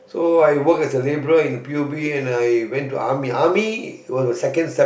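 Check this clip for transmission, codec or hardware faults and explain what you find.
Nothing stood out on listening to this speech recording.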